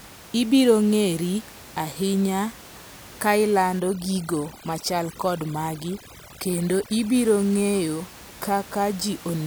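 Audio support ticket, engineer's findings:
Overdone noise removal, 3.80 to 7.15 s. Background drops and breaks up into twinkling specks. Probable component: noise suppressor, threshold set too aggressive. Bands near its noise estimate are cut hard, taking quiet speech detail with them. Room noise, about 20 dB below speech, is part of the recording outside this span.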